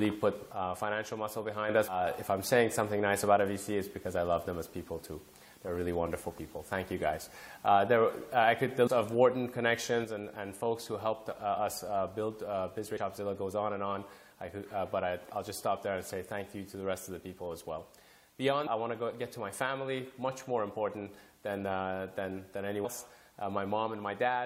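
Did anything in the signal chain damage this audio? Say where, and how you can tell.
Yes. One channel drops out, likely from a failing stereo lead or connector, so the mono sum falls abruptly by about 6 dB from 0.53 to 1.69 s and from 10.05 s onward.

Damaged data in the compressed stream throws the decoder out of sync, leaving short blips at 8.86–8.88 s, 12.97–12.99 s and 22.84 s.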